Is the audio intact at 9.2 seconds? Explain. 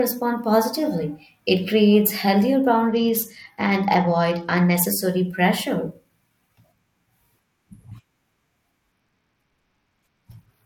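No. A Bluetooth SBC bit pool drop runs from 8.92 s to 10.65 s: the link fell to a far lower bit pool, consistent with roughly 90 kbps. The highest sub-bands lose their bits and the rest are coarsely quantised, so the treble turns dull and gritty noise rises.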